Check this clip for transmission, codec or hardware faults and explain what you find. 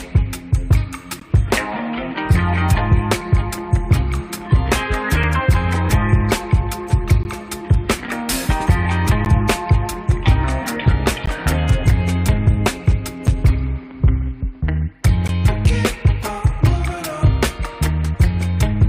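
Seven short silences break the sound, all from a gap between stream segments. They fall at 1.20, 5.23, 7.23, 9.25, 11.26, 13.27 and 15.28 s, mostly about 2 s apart, matching the segment length. Timestamps leave a 4 to 18 ms hole, filled with hard-edged silence; no audio is lost.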